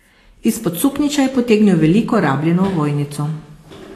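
From start to finish the speech has a grainy, hissy edge, and the top end stops dead at about 14.1 kHz. That's the sound of Vorbis compression, likely at a low setting; the amount of damage fits a bitrate around 35 kbps. With so few bits, the encoder quantises the treble so coarsely that the fine detail turns into noise-like hash, so consonants lose their crispness and the tone gets roughened.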